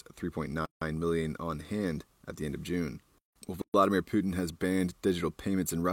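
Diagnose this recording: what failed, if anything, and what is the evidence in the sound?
Separately encoded pieces of this speech were joined without trimming encoder delay and end padding, leaving a gap at a join of encoded pieces. A gap with codec-smeared edges opens at 0.65–0.82 s (161 ms), before "million on hand at", and at 3.62–3.74 s (124 ms), then the speech resumes where it stopped.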